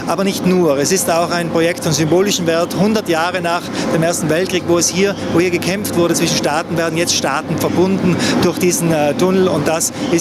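Gain pumping runs throughout: the gain ducks by around 10 dB under loud sounds, likely from excessive gain feeding a fast limiter, leaving a flattened, squashed waveform envelope.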